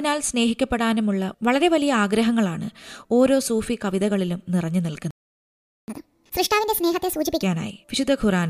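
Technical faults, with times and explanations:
5.11–5.88 s, playback stall: the speech cuts to silence mid-flow for about 0.77 s, then resumes. The gap is likely the player running out of buffered data, or its output thread being blocked, so nothing reached the output until it recovered.
5.88–7.43 s, catch-up at higher speed: after the stall the speech runs at 1.5 times normal speed, with pitch raised by about seven semitones, as the player resamples its backlog to recover lost time, then drops back to normal rate and pitch.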